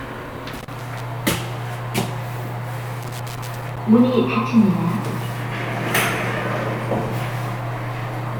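A worn or dirty contact makes and breaks as it shifts, chopping the signal into irregular bursts of scratchy crackle: loose connector crackle, from 0.55 to 1.00 s and 3.03 to 3.78 s.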